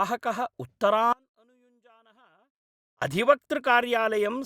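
At 1.13 s the speech drops abruptly to a faint residue, roughly 35 dB below its normal level, until 3.02 s, a loss of about 1.89 s. The likely cause is a signal break upstream of a still-live path. Unlike a pause or fade, it cuts out and returns suddenly.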